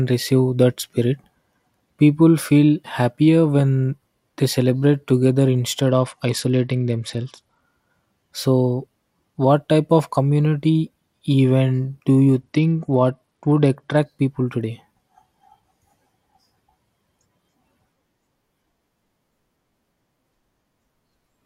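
At 5.81 s, right after "when they celebrate together", the speech suddenly dulls and turns gritty until 7.62 s. This is a Bluetooth SBC bit pool drop. The link had too few bits, so the top sub-bands lost their share and the rest were quantised coarsely. The sound fits a fall from bit pool 31 to about 11, near 83 kbps. It happens again from 12.41 s to 13.97 s, between "community event do you" and "people today".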